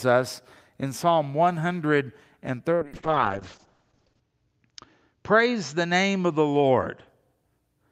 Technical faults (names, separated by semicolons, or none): call bitrate drop